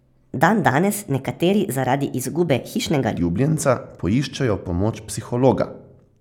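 A section at the wrong speed runs from the start to 3.17 s: the speech there plays 1.3 times faster than it was recorded, so pitch and tempo rise together, with the voice sounding hurried and raised by about five semitones. The likely cause is that this stretch was played back or edited against the wrong clock, which speeds up timing and frequency in equal proportion. At 3.17 s the speech drops abruptly back to its normal pace and pitch.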